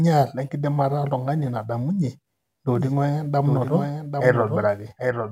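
A doubled audio track begins abruptly at 2.75 s and runs to the end: a second full-band copy of the speech trails the original by roughly 0.7 s, about 5 dB quieter, with no decay or room colour, likely from a slower capture path recording the same signal again.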